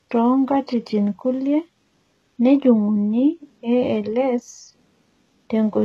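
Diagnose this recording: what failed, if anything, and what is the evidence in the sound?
The speech has gritty, metallic s sounds and a treble that is bright but synthetic. This is likely HE-AAC compression at the codec stage. Spectral band replication rebuilds the top octave from copied lower bands, which fits a bitrate around 16 kbps.

A single sharp click at 4.49 s appears as a thin vertical line across the spectrum. These are likely dropped samples at the driver or buffer stage. About one sample is missing, so the waveform jumps to a later value. The gap is far too brief to remove any sound.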